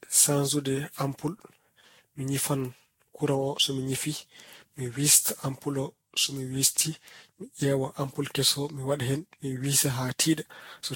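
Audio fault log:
Throughout: generation loss. The speech sounds swirly, hollow and smeared, and consonant attacks blur. Nothing is present above 16.6 kHz. This likely comes from around ten rounds of lossy re-encoding near 60 kbit/s, with each pass adding fresh quantisation noise and spectral holes.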